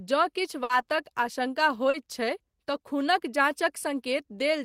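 At 0.63 to 0.72 s the last sound is held as a fading buzz or hiss, then the speech jumps ahead: a burst of packet loss, with about 60 ms filled in and 40 ms skipped. At 1.90 to 1.97 s a brief smear or wobble marks short concealed packet loss, where the receiver patched a 40 ms gap by continuing the preceding sound.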